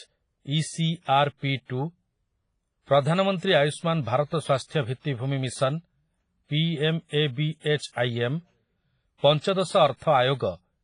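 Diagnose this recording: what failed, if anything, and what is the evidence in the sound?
WMA compression damage runs throughout the speech, a codec-stage fault. Nothing survives above about 10.1 kHz, and the sound is ringing and washy, with a hiss that swells and fades with the speech. This is likely a Windows Media Audio encode at a low rate, heavy enough to fit roughly 24 kbps: long transform blocks smear quantisation noise over tens of milliseconds, and weak spectral lines are zeroed, leaving the swirling, thinned texture.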